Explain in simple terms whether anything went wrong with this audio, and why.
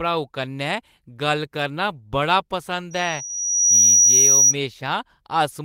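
Three problems overlap in the middle of the speech. Right after "करना बड़ा", at 2.91 s, a loudspeaker feedback squeal begins. The microphone picks up its own speaker, and a piercing 5.8 kHz tone grows over about a second, ending at 4.55 s.

During the squeal, from 3.25 to 3.31 s, there is a short concealed packet loss. About 40 ms of audio never arrived, and the receiver covered the hole by stretching the preceding sound, leaving a brief smear.

From 3.29 to 3.39 s, the audio is a lost packet rebuilt from error correction. A backup copy carried in later data replaced about 60 ms, which fits roughly three lost packets. It sounds rougher and noisier than the surrounding speech.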